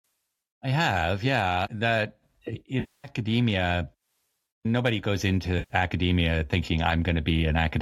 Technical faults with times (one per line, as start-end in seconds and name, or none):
2.80-3.08 AAC frame loss with concealment
5.58-5.74 AAC frame loss with concealment